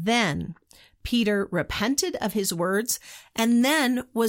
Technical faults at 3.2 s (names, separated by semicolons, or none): pre-emphasis left on